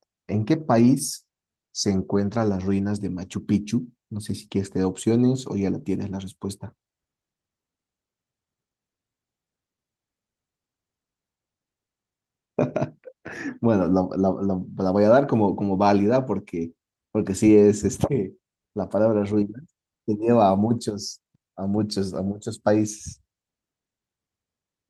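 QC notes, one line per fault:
No faults found in this speech clip. Nothing needs to be logged against it.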